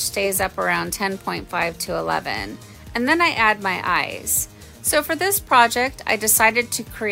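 No technical fault can be heard anywhere in the audio, and the signal stays continuous and steady throughout.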